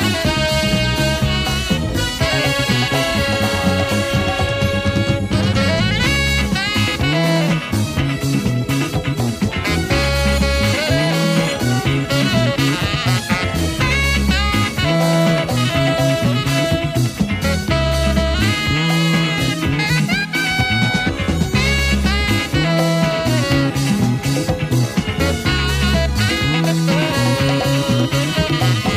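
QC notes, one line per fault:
No faults to note.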